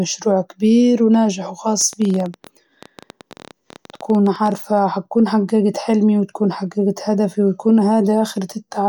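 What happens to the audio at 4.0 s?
At 4.0 s the speech sits inside a train of clicks that runs from 1.81 s to 4.53 s. Short pulses of much the same shape arrive about 14.4 times per second at an uneven pace, around forty in all, peaking at roughly the level of the speech itself. The result is a ticking that continues through pauses. A faulty connection or nearby interference is the likely cause. Unlike random crackle, the clicks stay uniform in shape.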